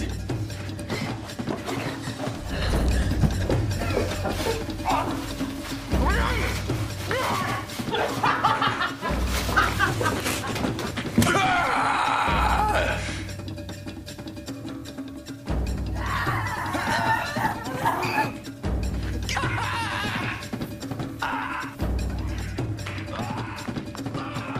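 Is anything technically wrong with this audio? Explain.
No, the signal shows no technical faults.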